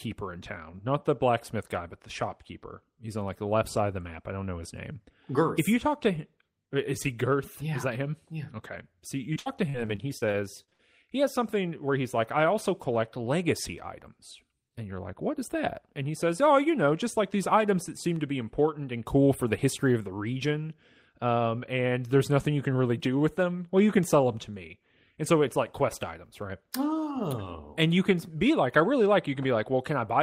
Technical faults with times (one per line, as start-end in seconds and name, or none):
9.33-10.81 repeated packet loss (robotic sound)